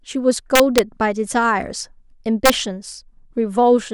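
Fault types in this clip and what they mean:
Integer overflow: the speech is pushed about 2 dB past the largest integer the format can hold, and instead of being limited the excess wraps to the opposite sign, so each overshooting peak snaps from full positive to full negative. It is heard as harsh cracks from 0.55 to 0.79 s and again around 2.46 to 2.50 s. A waveform shows sudden vertical jumps across the whole range, and a spectrogram shows bright broadband vertical streaks.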